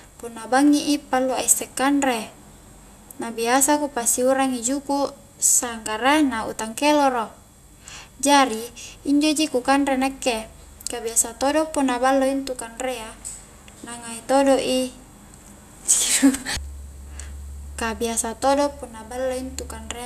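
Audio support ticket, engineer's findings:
Nothing stood out on listening to the speech clip; no findings to log against this ticket.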